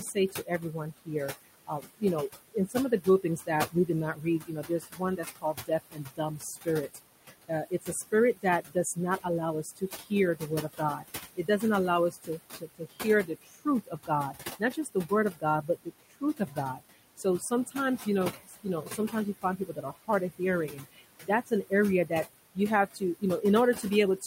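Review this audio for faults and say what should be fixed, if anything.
Noise suppressor artifacts, throughout the clip: the suppressor estimates the steady room noise, about 12 dB below the speech, and pulls every band it judges to be noise down by about 18 dB, frame by frame. The background therefore sinks between phrases and rises again under them. Lowering the suppression depth or lengthening its smoothing time would make these artifacts less noticeable.

Speech cut by the noise suppressor, from 0.0 s to the end at about 24 s: the suppressor mistakes parts of the speech for noise and turns them down with the background, by as much as about 21 dB at the deepest point. Quiet consonants and trailing syllables lose their energy, so they sound swallowed or faint against the louder vowels. Raising the suppressor's speech-detection sensitivity or capping its maximum attenuation would stop it from eating into the speech.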